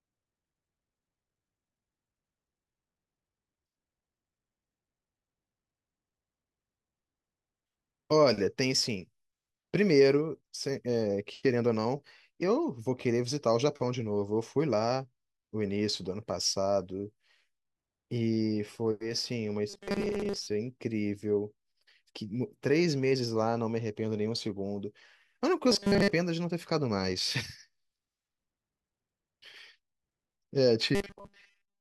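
Audio is likely arriving too seldom, so short buffers are repeated: at 19.70–20.49 s, 25.72–26.13 s and 30.95–31.81 s most of the speech is replaced by a 5 ms loop, imposing a rigid, metallic 200 Hz buzz, robotic sound that only loosely tracks the words.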